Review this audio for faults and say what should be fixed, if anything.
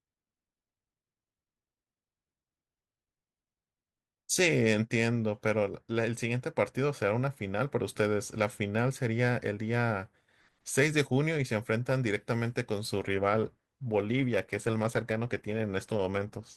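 From 12.99 s to the end at 16.56 s the speech switches abruptly to an adaptive stream at a lower bitrate. Codec artefacts grow, with no gap at the changeover. That fits the player dropping from an Opus rendition at around 64 kbit/s to one near 16 kbit/s after throughput fell. To prevent it, raise the minimum bitrate rung or buffer more before committing to a downswitch.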